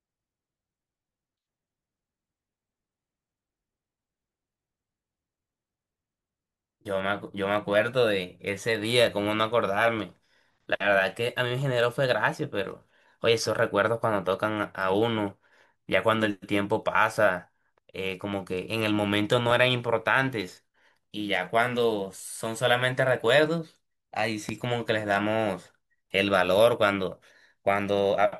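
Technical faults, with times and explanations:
19.51 s, block of digital silence: the speech drops out for about 5 ms, straight to silence and straight back with no fade at either end. A stretch that short doesn't register as a gap. You just hear a small tick, because the waveform jumps abruptly at both edges. A hole like that fits the output buffer not being filled in time, so the playback path sent zeros for one block instead of real samples.
24.49 s, loud pop: a single sharp pop sits on top of the speech, peaking roughly 10 dB above the surrounding level and lasting under 30 ms, while the speech carries on underneath without a break. It sounds like a sudden voltage step or pulse added to the signal, likely from a plug, a switch, static or a driver glitch, with the downstream circuitry shaping it into a short thump.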